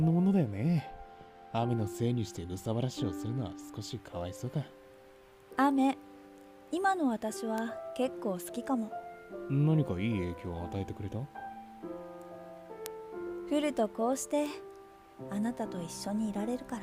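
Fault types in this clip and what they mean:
Bit error spike: A single flipped bit throws one sample, or two adjacent ones, far off its true value before it snaps back. Each is heard as an isolated sharp tick with broadband content, unrelated to the sound. Ticks occur at 7.58, 12.86 and 14.46 s.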